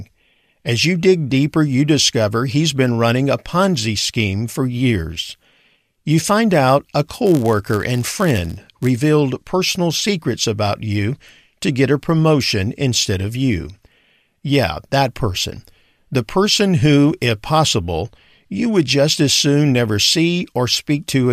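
From 7.25 to 8.87 s, a block size mismatch (padded) inserts zero-filled gaps, producing a 99.6 Hz buzz and slowing playback to 0.996 speed.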